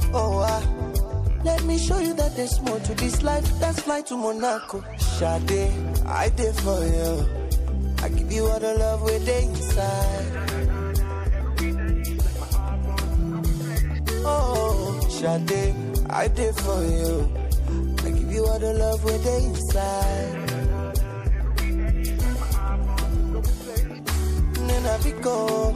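From start to finish the audio sounds watery and swirly with dulled treble, likely MP3 compression at a rate that fits a 64 kbps encode, starving weak frequency lines.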